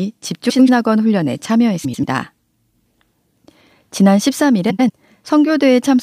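Frames out of order occur at 0.50 to 0.69 s, 1.84 to 2.04 s and 4.70 to 4.90 s. In each case two adjacent blocks of speech, each about 93 ms long, were decoded in swapped order, which fits runs of four frames apiece. Each stretch comes out as a brief garbled flutter. No time is lost.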